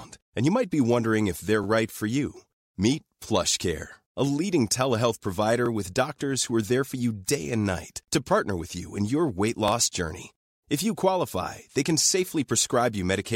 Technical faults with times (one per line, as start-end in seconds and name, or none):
1.64-1.66 overlapping chunks
5.66-5.68 overlapping chunks
9.68-9.71 overlapping chunks